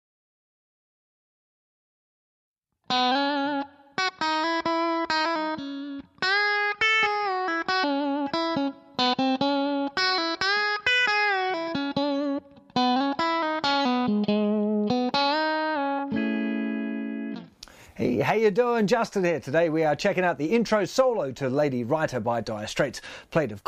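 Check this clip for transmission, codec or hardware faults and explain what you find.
The clip has one fault type, compressed frames skipped, occurring four times: at 5.24 s, 7.83 s, 12.37 s and 15.98 s. At each point whole coded frames never reached the output, so playback jumps forward. The first three jumps lose roughly 150 to 200 ms, which fits about seven frames of 26.1 ms. The last loses around 100 ms, nearer four frames. Each jump is heard as a sudden skip where the audio leaps ahead past the missing stretch.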